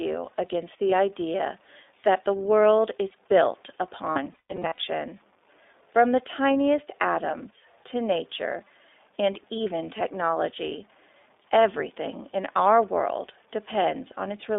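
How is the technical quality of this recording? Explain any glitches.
Technical quality is poor: the speech has been through a low-bitrate voice codec, carries quantization grit, and drops out twice.

Low bit depth without dither: the audio was likely truncated to very few levels, consistent with 8-bit, leaving signal-following grain around 35 dB below the speech, gritty on quiet passages.

iLBC codec: this narrowband VoIP coder, fitting a 15.2 kbps mode with 20 ms frames, passes only about 300 Hz to 3.6 kHz. The speech sounds boxy, rough and noticeably synthetic.

Lost iLBC frames: at 0.90 to 0.94 s, just before "idea that the world", one 20 ms packet vanished, and the decoder's repeated pitch cycle leaves a brief buzzy blip. From 4.10 to 4.79 s, after "the world is built", about 380 ms went missing in runs up to roughly 150 ms. That produces stretches of held, breathy, vowel-like buzz that recover quickly between losses.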